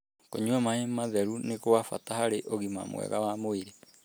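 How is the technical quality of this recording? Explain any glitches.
Nothing in the recording stood out as a technical problem on listening.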